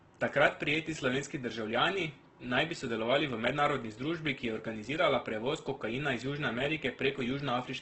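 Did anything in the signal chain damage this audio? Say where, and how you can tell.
Yes, Opus compression throughout: the speech sounds grainy and rough, with nothing above 8.2 kHz, likely a codec stage in CELT mode at a rate fitting about 12 kbps.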